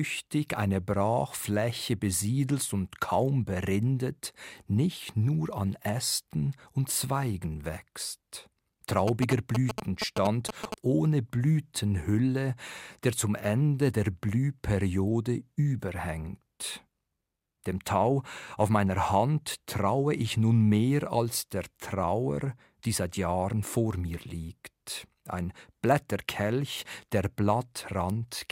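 A speech recording with a galloping dit-dit-dit of short buzzes from 9.08 to 10.74 s, sitting only a little below the speech in level. These are GSM signalling bursts: a nearby 2G phone was sending brief groups of radio bursts, as it does before an incoming call or text, and the audio circuitry rectified them into sound. Each buzz carries the 217 Hz repetition rate of the phone's transmission slots.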